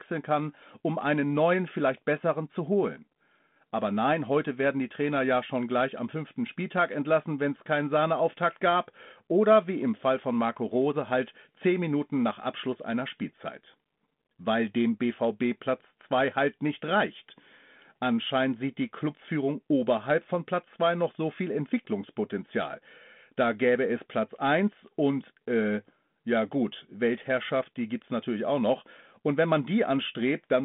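No technical faults can be heard in this speech.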